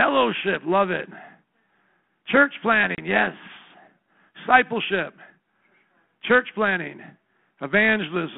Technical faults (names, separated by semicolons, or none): packet loss on an ADPCM call